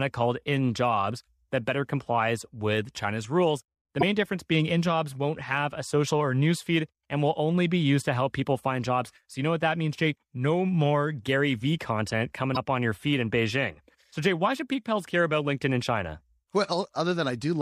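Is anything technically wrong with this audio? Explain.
Yes, there are two short glitches from damaged data in a compressed stream, at 3.99 to 4.03 s and again at 12.53 to 12.57 s, each about 44 ms long. In both spots some of the encoded bytes are corrupt, so the decoder misreads those frames, loses its place in the bitstream and has to hunt for the next valid frame header before normal playback resumes. You hear each one as a brief chirp, squawk, click or short hole cutting into the speech.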